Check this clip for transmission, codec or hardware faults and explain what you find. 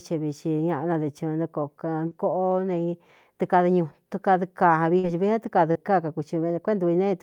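The speech has three short concealed packet losses, at 2.07 to 2.14 s, 4.99 to 5.06 s and 5.71 to 5.78 s. Each time, about 40 ms of audio arrived too late. The receiver extended the preceding sound, heard as a brief smear.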